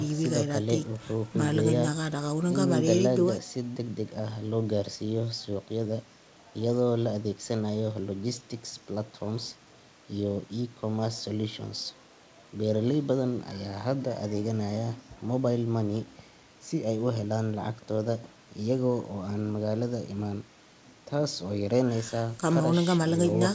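No technical faults can be heard anywhere in the speech. It has come through a working call path, and the lack of anything above 8 kHz fits a wideband codec such as G.722.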